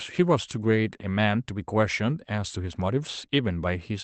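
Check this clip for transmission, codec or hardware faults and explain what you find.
No transmission, codec or hardware faults are present; the speech carries the expected coding texture of a call link and a top end that stops near 8 kHz, consistent with Opus at a low bitrate of around 20 kbps.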